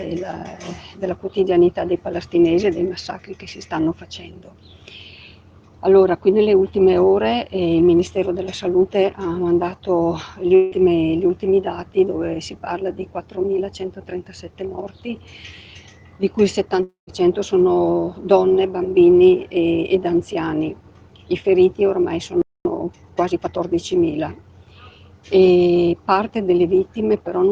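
At 10.55 s the sound freezes into a fading buzz for about 160 ms, then returns at 10.74 s with that stretch lost. At 16.83 s it happens again: the held sound trails off into silence, and audio resumes at 17.10 s, about 240 ms missing. Both are likely a long network dropout, with the receiver filling the gap.

At 22.42 s the output goes silent for about 235 ms. This is a playback stall. The player likely ran out of data or was blocked, then recovered at 22.65 s.

From 22.65 s to 23.59 s comes time-compressed catch-up. The player trims small pieces to clear its backlog. The sound runs hurried at 1.25 times normal speed, with its pitch unchanged.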